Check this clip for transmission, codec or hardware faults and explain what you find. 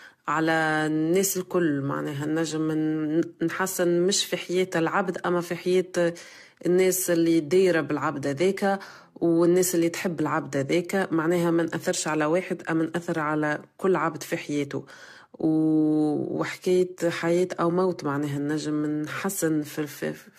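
There is one codec fault, and it runs through the whole recording. The speech carries generation loss from start to finish. Nothing is heard above 14 kHz. The sound is swirly and hollow, and consonant attacks are smeared. The cause is likely repeated lossy coding, around seven passes, in a codec that sounds like AAC at about 64 kbit/s. Each new encode quantises on a shifted frame grid. Noise and spectral gaps pile up beyond what one pass would leave.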